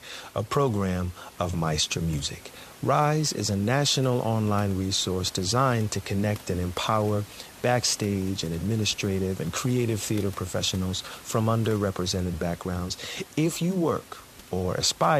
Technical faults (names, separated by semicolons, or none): none